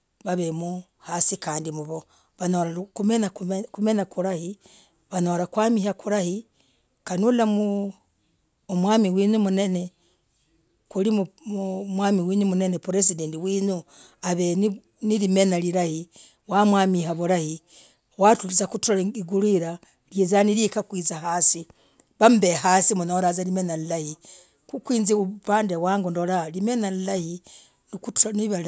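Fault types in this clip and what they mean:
Nothing in this speech recording stands out as a technical problem, so there's nothing to list here.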